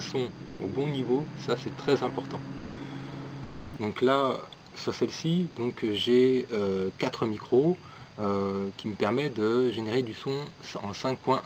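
At 0.47 s the sound briefly gives way to flat, steady noise until 0.59 s, then again from 2.57 to 2.77 s, and from 3.43 to 3.73 s, where the gap is longest and roughly 290 ms of real sound goes missing. These are likely cases of sound dropped by the voice detector: the sender judged the audio to be background and stopped transmitting, and the receiver filled in comfort noise until the detector picked the sound up again.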